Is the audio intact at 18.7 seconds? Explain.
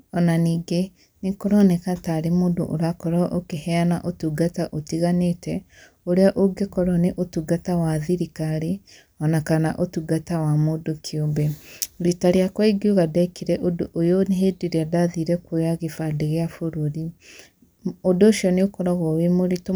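Yes, at 18.7 seconds the speech plays through cleanly, with no dropout, click, distortion or other fault to be heard at that point.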